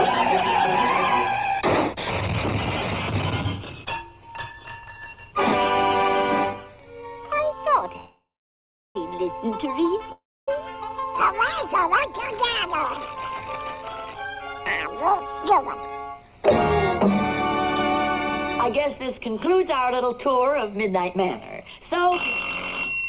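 At 7.96 s the audio stops moving for about a second, until 8.96 s. The last sound carries on as a fading buzz or hiss and then drops to silence for roughly 0.76 s before resuming right where it left off. That's a call audio freeze, likely from packets held up in transit so the jitter buffer ran dry. It happens again, shorter, from 10.12 to 10.49 s, with about 0.28 s of that silent. Nothing is lost in either case; a gap has just been inserted.

Later the receiver tries to claw that delay back with jitter buffer speed-ups. It snips out short pitch-period-sized pieces over and over, so the pitch stays put while the pace rises. From 14.58 to 16.49 s it runs at 109% speed, dropping around 0.2 s. From 18.69 to 22.37 s it runs at 112%, dropping roughly 0.4 s. In the final stretch from 22.90 s to the end it hits 137%. All three sound hurried, the last one most of all. Throughout, the G.711 mu-law call path leaves nothing above 4 kHz.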